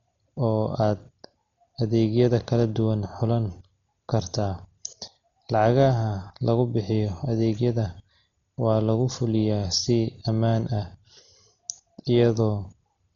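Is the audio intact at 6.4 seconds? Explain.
No, at 6.4 seconds the speech carries heavy Dolby Digital compression damage, present across the whole clip rather than as a local event. Nothing survives above about 6.9 kHz, and many frequency lines clearly got no mantissa bits, so the decoder has filled them with dither noise, giving a dull tone with a rough flutter around voiced sounds. That noise-filled flutter, rather than the swirly metallic warble of MP3, points to likely AC-3 coding, consistent with a very low rate around 32 kbps.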